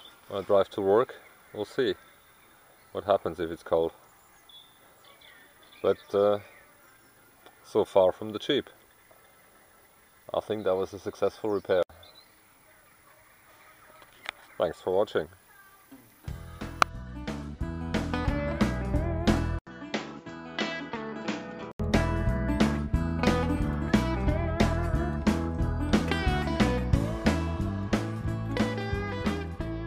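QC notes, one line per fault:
19.59–21.80 s, input switched to a poorer device: 80 ms gap, then duller sound, nothing above 7.6 kHz, slightly quieter, faint new background; likely a device change, not simple filtering.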